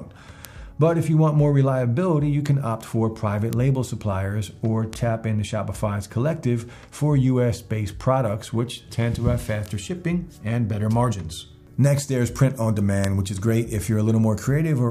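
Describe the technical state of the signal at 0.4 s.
At 0.45 s there is a bit error spike: a single sample jumps to about -5 dBFS and then falls straight back. A flipped bit in memory or on a digital link shifted that one value by a power of two, producing a sharp, full-band tick that has nothing to do with the surrounding audio. Unlike a dropout click, nothing goes missing and the signal continues seamlessly on both sides of the lone outlier.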